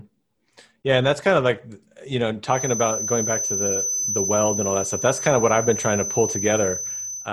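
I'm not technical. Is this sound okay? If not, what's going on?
No, not quite. From about 2.44 s right through to the end, there's a thin, high whistle sitting behind the speech, around 6.1 kHz, only a bit quieter than the talking and slowly swelling and fading in level. That's a feedback whistle. The likely cause is the loudspeaker's sound leaking back into the microphone, so the loop hovers right at the edge of howling, and one high pitch keeps ringing steadily instead of building up.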